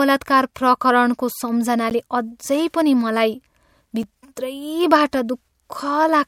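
A transform codec that never switched to short blocks spread its quantisation noise across about 26 ms windows, causing pre-echo in this speech at 0.54 s and 4.36 s: hiss rises about 18 dB and 16 dB for 15 ms and 12 ms before each attack. The output buffer likely went unfilled twice, leaving blocks of digital silence at 1.90 s (13 ms) and 4.03 s (5.8 ms, fitting a 256-sample buffer), heard as abrupt ticks or dips.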